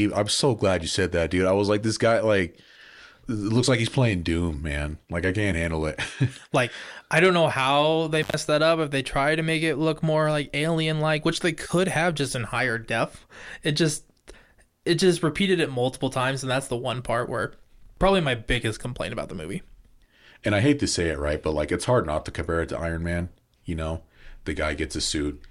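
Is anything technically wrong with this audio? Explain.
Yes, there is one intermittent contact fault in this speech, at 8.22 to 8.34 s. A loose cable or plug briefly loses connection for about 106 ms, so the signal path opens. The speech drops out abruptly, with crackle as contact breaks and returns, and faint hiss in the gap.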